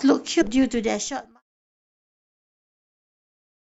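A speech clip with a brief glitch at about 0.40 s, lasting roughly 0.02 s. That is damaged data in a compressed stream: part of the encoded file was corrupted, so the decoder misread the affected frames, lost its place, and searched for the next valid frame header before resuming. The level then fades smoothly out from 1.42 s onward.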